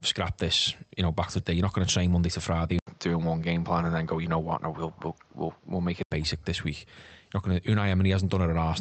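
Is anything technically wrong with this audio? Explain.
Yes, there are three faults.

Skip ahead, 1.39 to 1.41 s, just after "you know back to": about seven-tenths of a second of queued audio was dropped, and playback went on from later material. The speech jumps forward, and the two sides are joined almost directly with no gap filled in.

Jitter buffer speed-up, 1.53 to 2.62 s: the buffer was still holding more audio than it aims for, so it trimmed short pitch-period slices repeatedly, removing about a tenth of a second in all. The speech runs at 110% speed at unchanged pitch and sounds hurried.

Input switched to a poorer device, 2.79 to 6.11 s, ending just before "basic this week": the input most likely changed mid-recording to a lower-grade microphone. An 80 ms silence marks the switch. Nothing above 7.1 kHz remains, so the sound turns duller, with new background noise about 40 dB below the speech. 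The level stays roughly the same.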